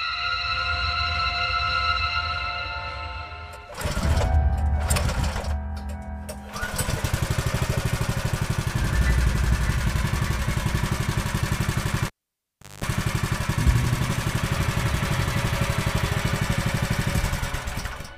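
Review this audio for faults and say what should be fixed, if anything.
At 12.07 s a sharp pop cuts the sound to near silence for about 0.73 s, and just before it returns at 12.85 s a rough 50 Hz hum lasting about 0.21 s breaks through, ending in a second pop. This is a cable pulled and plugged in while live: the first pop is the contact breaking, the gap is the open connection, and the buzz is mains pickup while only the plug tip touched before full contact restored the signal. Secure the cable, and mute or power down the channel before touching any connection during recording.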